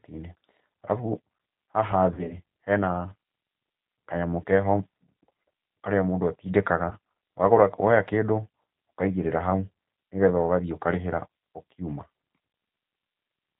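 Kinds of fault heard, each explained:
G.729 codec: The whole clip runs through 8 kbit/s G.729, so nothing above 4 kHz survives and the speech sounds plainly rough and synthetic.
VoIP packet loss concealed by the speech codec: Around 2.1 to 2.3 s, and briefly after "mũndũ atindĩkaga" near 6.9 s, the decoder stretches missing audio into a buzzy tone or coloured noise that fades.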